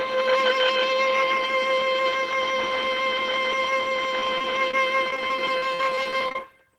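From 4.19 s to 6.36 s the music breaks up with repeated packet loss, giving it a robotic sound. Over those two seconds, a couple of dozen short holes open in the stream, the longest about 42 ms. Each is patched by extending the preceding sound, so roughly 0.37 s is filled in and about 17% of the stretch is concealed. The result is choppy playback with fragments missing.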